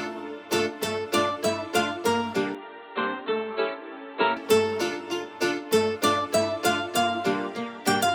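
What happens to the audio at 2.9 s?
At 2.9 s the sound turns dull and boxy, with nothing above 4.2 kHz and a faint new background noise. This lasts from 2.55 to 4.37 s, with no gap at either edge and no clear level jump. The likely cause is the input switching to a poorer device with a narrower band.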